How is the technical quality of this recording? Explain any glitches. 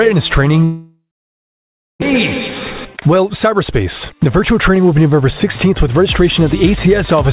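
The recording has clear transmission faults: one long gap followed by two stretches of accelerated playback. The band stops at 4 kHz, which fits narrowband G.711 A-law coding on a call path.

Long network dropout, 0.64 to 2.04 s: the last sound is stretched into a fading buzz, and then about a second of near-silence follows. This is likely a network dropout, with no packets arriving, so the receiver concealed the loss and then gave up. When the sound resumes, about a second of material is missing outright, and playback now sits roughly 0.4 s later than before.

Jitter buffer speed-up, 2.98 to 5.22 s and 5.66 to 7.16 s: after the gap, the buffer holds surplus audio, so the receiver repeatedly cuts out short pitch-period pieces to drain it. The first stretch plays about 9% fast and removes around 0.2 s. The second plays about 5% fast and removes roughly 70 ms. Pitch is unchanged, but the sound is noticeably hurried, especially in the first stretch.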